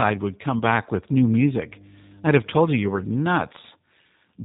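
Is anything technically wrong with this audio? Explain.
Yes, there are three problems. The whole thing carries G.729 codec damage: it sounds band-limited below 4 kHz and slightly rough and synthetic, which fits an 8 kbit/s stream built from pulses and a vocal tract filter. Around 0.59 to 0.63 s there's VoIP packet loss concealed by the speech codec. About 20 ms went missing, and the decoder stretched the previous sound into a brief buzzy tone or coloured noise. From 1.38 to 3.18 s there's mains hum, a steady 50 Hz drone from a ground loop or nearby transformer, sitting well below the speech.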